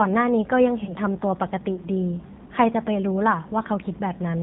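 G.729 codec damage runs through the whole speech recording. The sound's roughness and narrow band fit G.729A at about 8 kbit/s, which rebuilds each 10 ms frame from a vocal tract filter, a pitch predictor and a handful of pulses instead of the original waveform. Nothing above 4 kHz survives, so sibilants lose their edge, and the modelled excitation leaves the speech plainly gritty and slightly synthetic from start to finish.

VoIP packet loss concealed by the speech codec follows at 0.84 to 0.92 s, where a 30 ms gap points to a single lost packet. The decoder bridged it by carrying forward its last pitch and filter settings at falling gain, so the sound smears into a brief buzzy tone or coloured noise that fades. Because each frame predicts from the previous one, the speech stays weakened and distorted until about 0.92 s, well after the missing audio itself.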